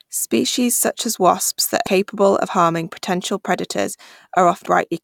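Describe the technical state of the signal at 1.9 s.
Compressed frames skipped at 1.86 s, between "such as wasps that" and "of harming potential". Several whole compressed frames never reach the output, either missing from the file or rejected by the decoder as damaged, so playback jumps forward by around a tenth of a second. That fits about five frames of 21.3 ms each. The speech jumps abruptly ahead at the join.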